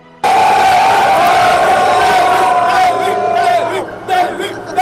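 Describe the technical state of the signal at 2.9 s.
At 2.9 s the signal is intact, with no dropout, distortion, glitch or other audible fault at that point.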